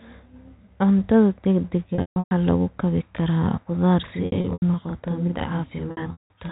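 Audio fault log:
1.95–2.31 s, 4.26–4.62 s and 5.91–6.30 s, packet loss with pitch repetition: in each window the stream dropped packets in scattered runs, losing about 300 ms, 180 ms and 240 ms of audio, with longest gaps of 150 ms, 90 ms and 180 ms. The receiver filled each hole by repeating the last pitch period and fading it out over roughly 50 ms. Brief gaps come across as a held, buzzy tone. The longer runs fade to silence before the sound cross-fades back in.
4.07 s to the end, channel delay (doubling): one channel runs 40 ms behind the other, and the two are summed to mono. The late copy arrives at the same level as the original, so from 4.07 s every sound is heard twice in quick succession, a doubled, slapback quality laid over the narrow 4 kHz telephone band of the G.711 line.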